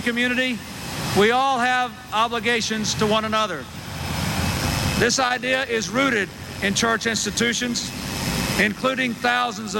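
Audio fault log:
4.53 to 9.79 s, overlap-add ripple: the audio is split into windowed frames and rejoined with an overlap whose windows fail to sum to a constant gain, so level dips and rises by about 6 dB once per frame, roughly a hundred times a second, heard as a metallic buzz with extra tones around each note.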